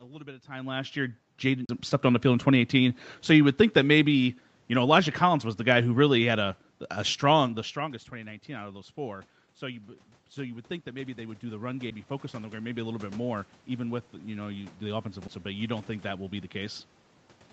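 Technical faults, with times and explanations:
0.27 to 3.02 s and 14.11 to 16.88 s, automatic gain rising: The gain control judged the input too quiet and raised its gain step by step. The speech and room noise swell together, by about 11 dB in the first span and about 4 dB in the second, after "even with".
1.65 to 1.69 s, 11.90 s and 15.28 s, CD skip: Each event is a tick or short gap followed by a jump in the sound. The laser lost its track and landed on another turn of the disc. The player muted briefly, for a few tens of milliseconds at first and just a few milliseconds later.
3.30 to 6.49 s, automatic gain falling: The gain control judged the input too loud or its background noise too strong and pulled its gain down gradually. Speech and background sink together by about 5 dB, just before "a strong the strongest".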